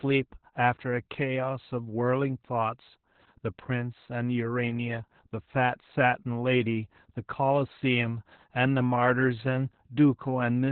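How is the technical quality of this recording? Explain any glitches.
The quality is poor: heavy Opus voice compression runs through the whole speech clip. The encoder is working in its SILK linear-prediction mode with the band cut to narrowband, so nothing reaches above about 4.2 kHz, and the excitation is coded very coarsely, which fits a bitrate around 8 kbps. The missing upper band makes the voice muffled and telephone-like, while the crude excitation leaves it hoarse, buzzy and faintly robotic from start to finish.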